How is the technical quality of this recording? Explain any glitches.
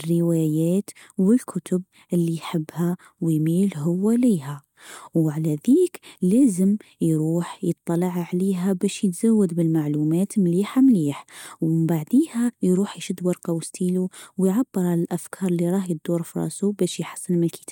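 The recording's signal is technically sound, with no glitches or other faults to report anywhere in the speech.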